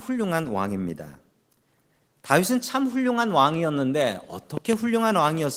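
A loud pop, heard as two pops between 4.57 and 4.75 s, stands roughly 10 dB above the speech, which continues beneath them. A sudden voltage pulse, likely from a plug, switch or static discharge, entered the chain and was briefly shaped by later circuits, while the Opus voice coding leaves only light traces.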